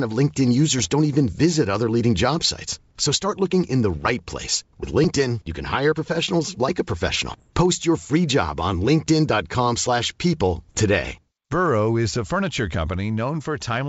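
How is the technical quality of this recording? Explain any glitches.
The recording comes through a G.722 wideband link at what sounds like 64 kbit/s, with a faint upper-band hiss, and it carries four short bursts of bit errors on an ADPCM link: 0.79 to 0.93 s just before "even visit other leading", 3.92 to 4.10 s between "start looking in the" and "right place", 7.29 to 7.50 s after "hire professionals like a", and 10.69 to 10.81 s. A fraction of a percent of bits are flipped, and each flip knocks the decoder's predictor and step size off track, so it rings on for milliseconds as pops and rough bursts with brief level jumps. On a waveform these show as spiky, uneven amplitude, and on a spectrogram as vertical broadband smears.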